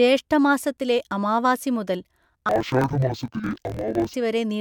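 Speech, with interleaved audio read as planar from 2.49 to 4.14 s. The sound drops an octave, doubled and choppy, at 43.1 Hz, which fits 1024-sample blocks.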